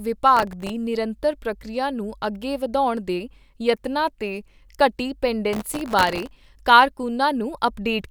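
A gritty burst of crackle tears across the speech from 0.37 to 0.70 s, ending just before "ਨਿਰੰਤਰ ਪ੍ਰਕਿਰਿਆ ਨੂੰ ਅੱਗੇ", and a longer one runs from 5.53 to 6.49 s after "ਦੇ ਯਤਨਾਂ ਤੇ ਘਟੀ". This is processor overload crackle. Tiny buffers of about 0.7 ms kept missing their deadlines, about twenty times in the first burst and around a hundred in the second. Each missed buffer was filled with a hard-edged scrap of old audio.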